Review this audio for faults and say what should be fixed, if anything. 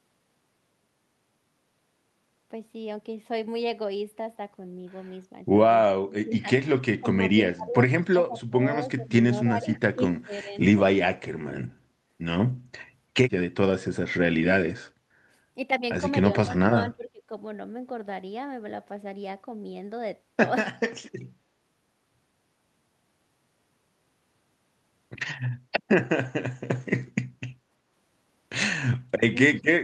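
The speech drops out in short dips, a pattern of speech suppressed in double talk. It happens at 5.86–6.81 s, 6.99–7.08 s, 7.52–8.64 s, 8.82–9.17 s, 9.49–10.55 s, 11.46–11.51 s, 16.68–17.31 s and 29.54–29.67 s. The deepest cuts reach about 15 to 30 dB. The likely cause is an echo canceller meeting far-end speech. It cannot tell the talker from loudspeaker echo, so it turns both down. To prevent it, use a canceller with proper double-talk detection.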